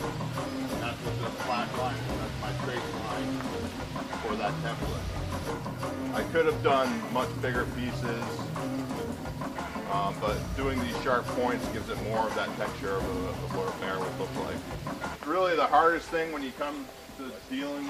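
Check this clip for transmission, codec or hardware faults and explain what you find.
No transmission or hardware faults heard.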